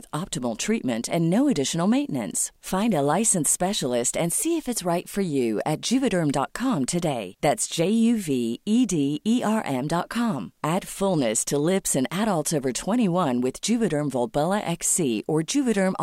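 No technical faults are audible anywhere in the recording.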